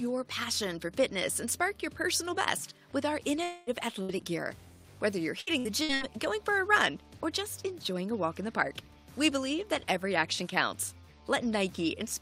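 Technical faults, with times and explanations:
3.43–3.70 s, long network dropout: sound is replaced by a fading continuation for about a quarter second, then resumes with audio lost. This is likely a dropout, longer than the single bursts.
4.03–4.12 s, burst of packet loss: about 60 ms goes missing, bridged by a brief held, fading extension of the preceding sound. It is one short gap, not a repeating pattern.
5.41–6.04 s, repeated packet loss (robotic sound): four gaps, each at most 60 ms, are patched in quick succession. About 38% of this stretch is concealed, giving a choppy texture rather than a single hole.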